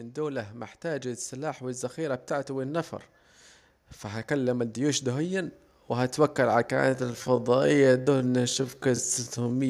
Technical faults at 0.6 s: automatic gain rising

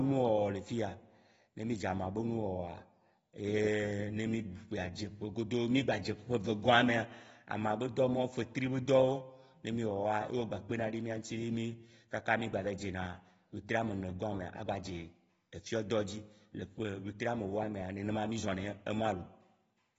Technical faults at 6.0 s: AAC compression

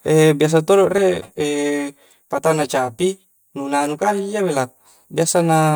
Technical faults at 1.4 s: channel delay (comb filtering)

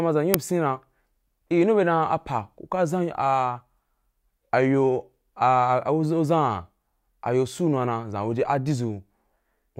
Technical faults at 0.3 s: uninitialised buffer

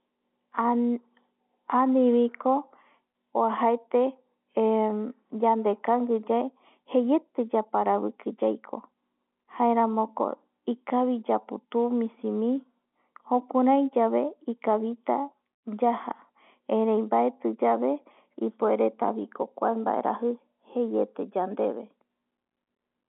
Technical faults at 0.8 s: none

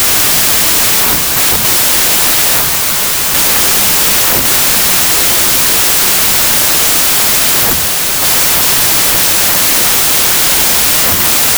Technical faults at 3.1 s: wrong sample width

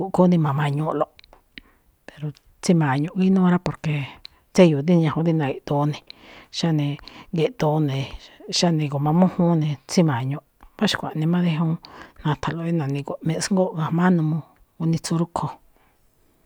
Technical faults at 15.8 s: none

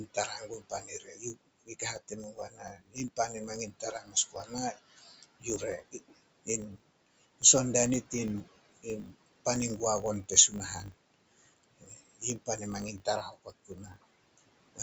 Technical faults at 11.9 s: noise suppressor artifacts; filter restarted on every block; speech cut by the noise suppressor

